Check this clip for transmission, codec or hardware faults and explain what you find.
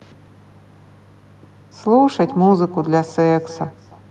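One fault runs through the whole speech clip: echo with no canceller. At the far end, the call was played on a loudspeaker, and that end's microphone picked it up again. No echo cancellation removed it, so the sound travelled back across the network. As a result, every phrase is shadowed about a third of a second later by a fainter copy, roughly 20 dB down. The copy sounds thinner than the direct speech. The call path itself is audible as the usual Opus coding, with the top end stopping around 12 kHz.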